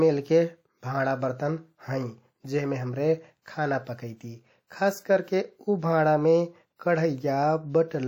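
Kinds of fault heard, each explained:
WMA compression: Throughout the speech there is a plainly audible ringing, washy quality, with a hiss that swells and fades with the level of the voice. This is likely the work of a transform codec such as Windows Media Audio at a low rate, which fits something around 48 kbps. Content stops at about 20.1 kHz, with nothing above it. A spectrogram shows blurred, smeared energy and patchy gaps where quiet detail has been zeroed.
Pre-echo: At 3.42 to 3.46 s and at 4.67 to 4.70 s, a short hiss arrives just before a sharp speech onset. That hiss lasts about 40 ms at the first spot and about 33 ms at the second. The noise that the codec shaped for the loud attack spills across its whole block, filling the silence ahead of it and softening the onset. On a waveform, low fuzz ramps in before the transient, and on a spectrogram the broadband smear starts early.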